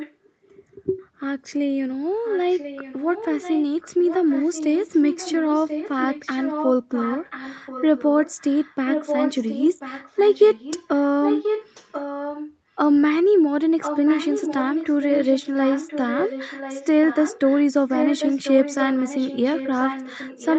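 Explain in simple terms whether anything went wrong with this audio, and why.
Yes, something went wrong: there is an echo leak through most of this speech. A second, fainter copy of the talking trails about one second behind the original. You can hear it at 0 to 0.3 s, 2.24 to 3.64 s, 3.8 to 5.9 s, 6.1 to 6.71 s, 6.92 to 11.04 s, 11.23 to 12.47 s, 13.8 to 17.64 s and 17.88 s to the end. It is loudest around 11.2 to 12.5 s. The likely cause is a loudspeaker whose sound the microphone picked up again. The echo canceller failed to remove it, so it went back down the call. The sound is also missing its very top end, which points to an ordinary call codec.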